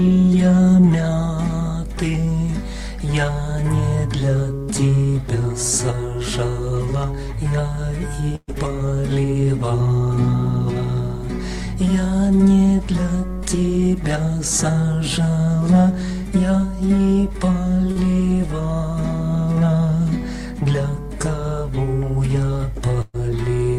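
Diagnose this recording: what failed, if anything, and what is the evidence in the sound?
The network dropped audio in two bursts of packet loss, at 8.35 to 8.50 s and 23.01 to 23.16 s. Each time about 120 ms of the stream never arrived in time. The receiver extended the last sound and faded it, so the gap is a held, decaying tail. It runs into about 40 ms of silence in the first case and about 10 ms in the second. The sound then resumes with that stretch missing.

A short concealed packet loss at 17.92 to 17.97 s is also a network fault. Roughly 40 ms failed to reach the decoder. The receiver covered about 38 ms by continuing the preceding sound, from its pitch or as shaped noise, and then crossfaded back into the real signal. The result is a brief smear or wobble where the original material is absent.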